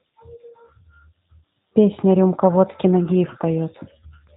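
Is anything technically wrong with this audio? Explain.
Yes, the whole clip has been through a G.729 codec, and the damage is plainly audible. The speech is rebuilt from a vocal tract filter, a pitch predictor and a few pulses per short frame, so nothing reaches above 4 kHz. It sounds muffled, slightly rough and synthetic, consistent with an 8 kbit/s VoIP stream.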